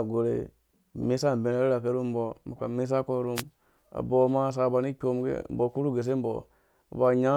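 At 3.35 s, a wireless microphone noise hit interrupts the speech for about 80 ms, until 3.43 s. The FM radio link fades briefly as reflected signals cancel. Receiver noise surges up, heard as a short swish of static.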